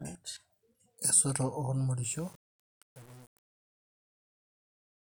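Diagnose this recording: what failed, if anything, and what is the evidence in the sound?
The speech fade-out, beginning at about 2 s and ending at 5.08 s, shows truncation distortion on a fade from 2.03 s to the end. A gain or sample-format conversion stage discarded low bits without dither, and the coarse steps fit a 7-bit word length. As the level drops, the tail turns gritty. On a waveform the decaying signal collapses into stair-stepped square shapes; a spectrogram shows broadband harmonic grit smeared above the fading speech.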